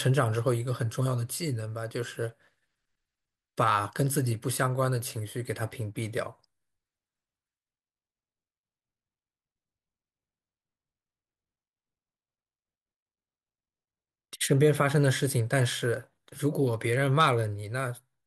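No technical faults are audible anywhere in the speech recording.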